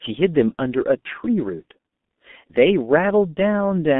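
The G.723.1 codec affects the speech for its whole length. The band runs only from about 200 Hz to 3.6 kHz. The coarse sound fits a rate near 6.3 kbit/s. The narrow band and slow model updates leave it muffled and hoarse, with smeared consonants.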